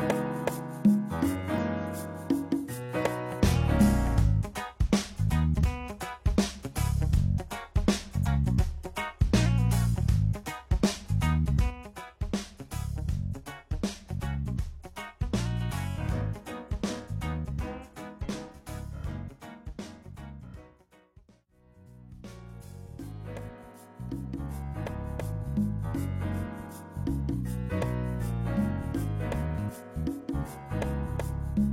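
At 1.58 s, then from 5.58 to 5.62 s and from 8.22 to 8.28 s, damaged data in a compressed stream breaks through as short glitches. Corrupted bytes leave the decoder misreading frames. It loses sync and hunts for the next frame header.

At 11.70 s a sudden gain jump drops everything by about 6 dB and holds that level to the end. The likely cause is a digital gain setting or one-bit shift applied with no ramp. The background noise falls together with the sound, in a single step, so it is not a fade or a compressor acting.

The same stream damage returns from 18.21 to 18.26 s and from 24.85 to 24.89 s, again as brief glitches.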